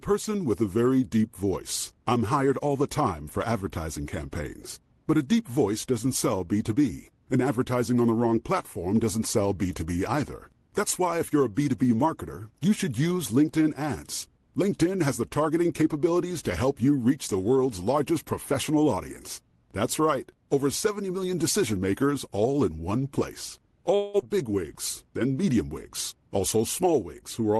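At 23.95 s, right after "all in one place", the speech gives way to a fading buzzy continuation of the last sound until about 24.24 s, when it resumes at "wigs then medium" with roughly a seventh of a second of speech gone. This is most likely a long network dropout: packets stopped arriving and the receiver extrapolated the final sound for about 0.26 s instead of going silent. On a spectrogram the harmonics smear into a blurred, decaying band with no new onsets; the waveform shows a smoothly shrinking envelope rather than a gap, and the delay shifts by something like 70 ms afterwards.

From 26.11 to 26.87 s, after "wigs then medium", a jitter buffer speed-up compresses the speech to about 106% speed at unchanged pitch, cutting around 50 ms in total. The receiver had accumulated surplus buffered audio and trimmed it by repeatedly removing short pitch-period chunks, so the delivery sounds slightly hurried. 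The spectrogram keeps the harmonic spacing steady while syllables and formant transitions sit closer together. The waveform shows tiny splice points between pitch cycles, all within the Opus call path's roughly 12 kHz bandwidth.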